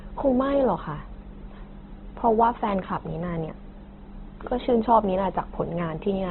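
From start to finish the speech carries heavy Opus compression damage, most likely from an encoder squeezed to a very low rate, something on the order of 12 kbps. Nothing gets through above 4 kHz, so it's narrowband and dull up top. In its music-style mode the codec has kept each band's energy but filled the gaps with folded or noise-like content, which is why the voice sounds grainy and rough instead of swirly.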